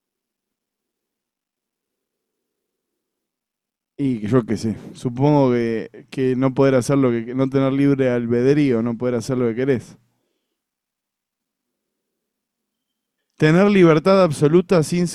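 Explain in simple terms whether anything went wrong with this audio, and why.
Nothing went wrong; no technical fault can be heard.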